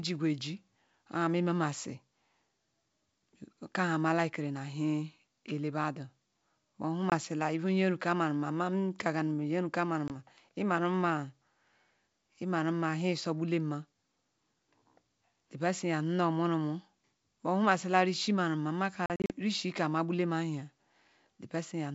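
Packet loss on an ADPCM call cuts 20 ms holes at 7.10 s and 10.08 s, then scatters about 140 ms of losses across 19.06 to 19.31 s, which fits roughly seven lost packets. Each gap is hard-edged silence. Because the decoder's predictor and step size drift from the sender's, the speech returns slightly distorted and settles within tens of milliseconds. The G.722 wideband path sounds clear around these gaps.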